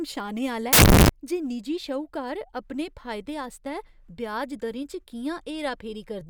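At 0.73 s the speech suddenly turns into a burst of loud, harsh broadband noise that runs until 1.09 s, just before "जे निजी श्हूकार अपने". That's samples built from the wrong bytes: the reader is assembling each sample with the bytes misaligned or swapped, so the jittery low-order bits end up acting as the big part of every value. What you get is harsh hiss in place of the signal.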